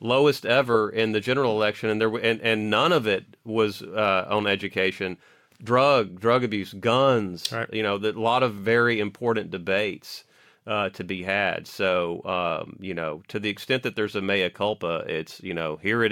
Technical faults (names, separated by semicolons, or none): none